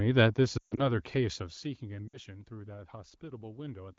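Lost AMR speech frames at 0.57 to 0.90 s, including a 140 ms run, and again at 2.07 to 2.19 s. The decoder repeats the last good frame at falling gain, so the speech smears, fades briefly, then returns rough.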